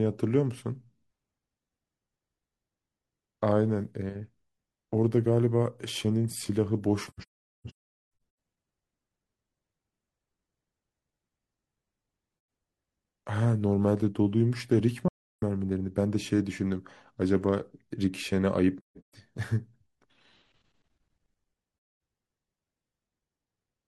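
Speech with soft-edged silent holes at 7.07 to 8.21 s (broken gaps, longest around 0.4 s), 12.35 to 12.48 s, 15.08 to 15.42 s, 18.78 to 19.14 s and 21.74 to 22.00 s. This is AAC frame loss with muting: the decoder zeroed the missing frames' spectrum, and the overlapping windows faded the sound out and back in.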